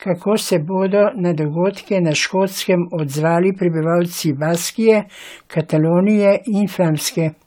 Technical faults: generation loss

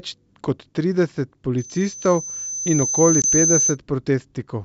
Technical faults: loudspeaker feedback squeal; packet loss on an ADPCM call

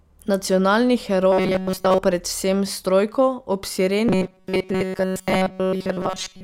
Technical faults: robotic sound from repeated short buffers

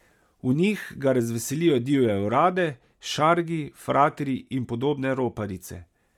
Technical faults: Bluetooth LC3 compression

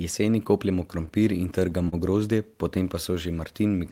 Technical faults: repeated stalls (stutter)

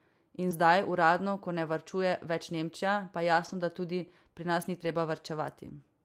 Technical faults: short concealed packet loss; lost packet rebuilt from error correction

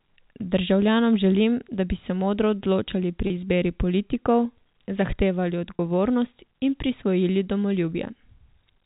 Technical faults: packet loss with pitch repetition

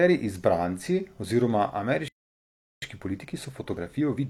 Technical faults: playback stall; time-compressed catch-up

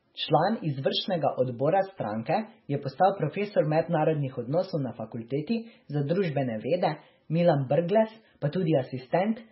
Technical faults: MP3 compression

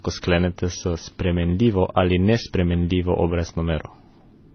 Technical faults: transcoding between lossy codecs

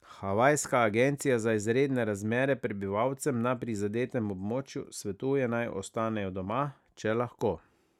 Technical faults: none

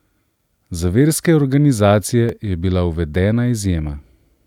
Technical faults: block of digital silence

